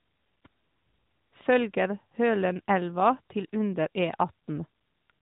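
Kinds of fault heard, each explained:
No faults heard in this speech.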